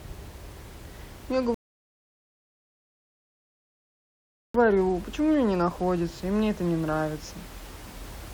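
From 1.54 to 4.54 s the speech stops dead for 3 s, a rebuffering stall: playback starved, then resumed exactly where it left off, unlike a dropout that loses sound.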